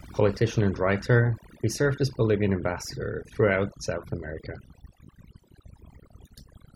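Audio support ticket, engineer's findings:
Throughout: background drops and breaks up into twinkling specks between phrases. Component: noise reduction stage, set far too strong. Overdone noise removal: bands near the noise estimate gated off, taking quiet speech detail with them.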